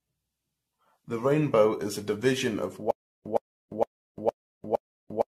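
From the start the speech sounds swirly, smeared and hollow, with blurred consonant attacks and nothing above 14 kHz. This is likely generation loss: repeated re-encoding, around ten passes of AAC-LC at about 64 kbit/s, each requantising on a shifted frame grid so the damage accumulates.

At 2.91 s, just after "is a division of", a 113 ms fragment repeats five times every 462 ms, separated by 348 ms of digital silence, through to the end. This stutter with silent gaps likely comes from the stream stalling, replaying its last fragment and then running dry, so the audio meant for those gaps is lost.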